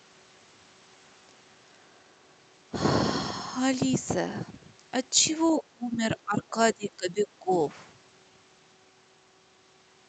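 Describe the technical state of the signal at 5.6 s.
At 5.6 s the speech sinks sharply, by roughly 25 dB at its deepest, from 5.56 to 6.02 s. This is likely speech suppressed in double talk: both ends spoke at once, and the echo canceller attenuated the near voice along with the echo.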